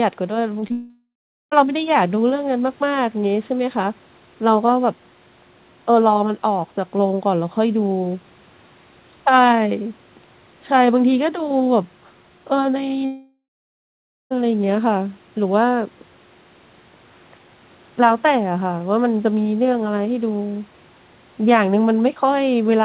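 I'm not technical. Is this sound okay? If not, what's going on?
No. Near the start, at 0.60 to 0.64 seconds and again at 0.68 to 0.72 seconds, there is short concealed packet loss. Tiny bits of the call arrived too late. The receiver guessed the missing sound, so you hear a quick smear or wobble.

Right after, from 0.72 to 1.53 seconds, the speech stops. This is likely a long network dropout. A fading buzz or hiss fills the gap, then about 0.4 seconds of silence. It happens again from 13.05 to 14.32 seconds, with nearly a second of silence. The speech returns with that part missing.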